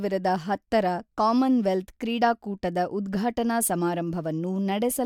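Nothing in the recorded speech points to a technical fault. No problem can be heard at any moment in the audio.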